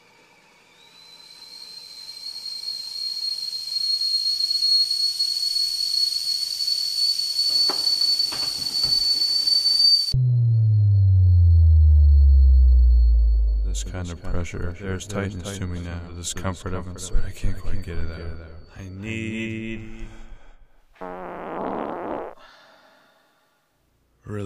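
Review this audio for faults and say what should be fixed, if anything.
Nothing should be fixed, as no faults can be heard in this audio.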